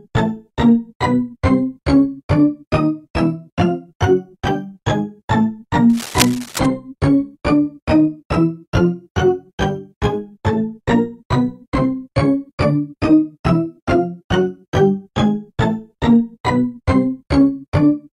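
A worn cable, connector or control carrying a DC voltage was likely disturbed from 5.89 to 6.66 s, making its contact resistance jump rapidly. The result is cable scratch noise: dense, uneven bursts heard as scratching and rustling over the sound, roughly 10 dB beneath it.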